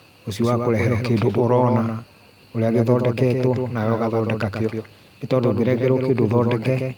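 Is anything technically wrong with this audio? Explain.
Yes, there are three faults.

Doubled audio track, throughout the clip: the same speech is heard twice, with a full-band copy trailing the original by roughly 150 ms and sitting about 5 dB quieter. Unlike a room reflection, the copy has no decay or reverberant colour. It is a clean, slightly weaker duplicate. The likely cause is a second, slower capture path mixing the signal back in late. It sounds like a hard, slapback-style echo on every syllable.

Clock drift between sender and receiver, throughout: the sending device's audio clock runs about 1% slower than the receiver's. Audio arrives a little too slowly, so the receiver's jitter buffer keeps drifting toward empty and the playback side has to compensate continually. The result is small timing irregularities spread across the whole clip rather than one clear glitch. The speech never quite settles into an even flow.

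Repeated timing corrections, from 0.04 s to 6.61 s: to cover the slow sender, the receiver plays back at about 99% speed by repeatedly repeating short pieces of audio, adding roughly a tenth of a second overall. These edits all push in the same direction but fall at uneven intervals. Each one is tiny, so they come through, if at all, as faint hiccups and a slightly unsteady, dragging tempo.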